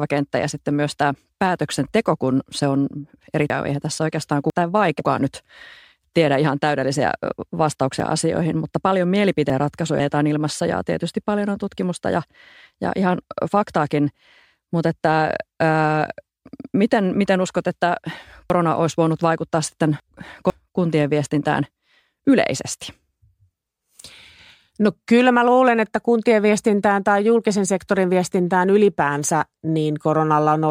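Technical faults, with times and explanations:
3.5–5.0 s, 8.0–10.0 s and 18.5–20.5 s: chunks out of order. A half-second slice of the speech turns up late, after the two (first spot) or three (later spots) slices that should follow it, so the phrase sounds jumbled, with three hard joins.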